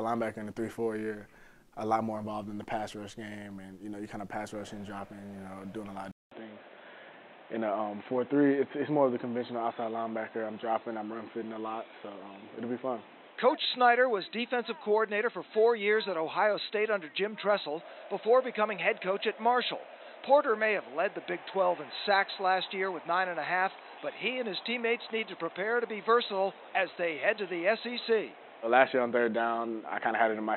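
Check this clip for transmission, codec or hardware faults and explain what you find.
One fault is present: from 6.11 s to the end, the sound matches an input switched to a poorer device. A 200 ms silence marks the switch, after which nothing is left above 4 kHz, so the sound turns dull and boxy. A new background noise appears roughly 30 dB below the signal, while the overall level stays about the same. The likely cause is the system changing to another microphone or a headset's call profile, whose narrower bandwidth and own noise floor replace the original input.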